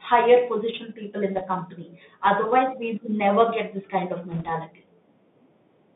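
Throughout, the speech carries the Bluetooth CVSD headset codec's sound: a narrow line band from about 150 Hz to 3.7 kHz, consistent with a 64 kbps one-bit delta stream. The adaptive step lags loud, bright passages, so sibilants turn scratchy over a granular hiss. A spectrogram shows empty space above roughly 3.7 kHz and a grainy noise floor.

From 1.36 to 1.42 s, and again from 4.31 to 4.50 s, bit errors on a Bluetooth voice link add a brief rushing crackle. The error rate is around one percent, and each flipped bit's effect grows with the speech level but dies away quickly, so no loud clicks appear. The waveform shows fuzzy roughness rather than spikes, and the spectrogram shows diffuse speckled noise across the band.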